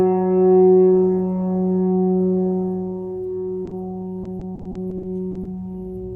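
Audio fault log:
3.65–3.73 s: short concealed packet loss, two back-to-back events at 3.65 s and 3.69 s, each covering about 20 ms of missing audio. The decoder had nothing to play for roughly 40 ms in total, so it extended the preceding sound, following its pitch where there was one and substituting shaped noise where there was not, then crossfaded back into the received signal. The result is a brief smear or wobble.
4.23–5.47 s: repeated packet loss (robotic sound). Ten separate dropouts fall within this 1.2 s stretch, totalling 280 ms of missing audio, so concealment covers about 23% of the span. The longest single gap is 40 ms. Each hole is patched by continuing the last sound, but the next dropout arrives before the signal has fully recovered. Stacked concealment like this gives a choppy texture with fragments missing throughout the stretch.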